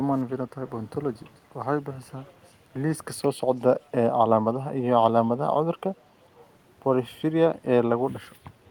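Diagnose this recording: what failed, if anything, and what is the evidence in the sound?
Echo leak, at the call-processing stage. A faint copy of the speech returns 438 ms late at 0.17 to 0.21 s, 0.67 to 0.85 s, 1.14 to 1.39 s and 2.27 to 2.54 s. It sits far beneath the speech. The likely cause is a loudspeaker echo canceller letting residue through.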